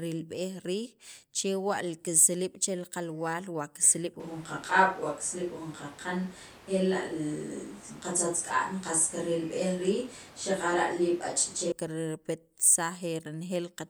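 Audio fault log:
4.2–11.72 s, switch to a distant microphone: the close microphone's feed most likely dropped out and the recording fell back to a microphone further from the talker. The speech suddenly turns roomy and hollow, with thinner bass, because more reflected sound reaches the distant capsule. The level stays about the same, but background noise rises to roughly 20 dB below the speech. The close, fuller sound returns just as abruptly at 11.72 s.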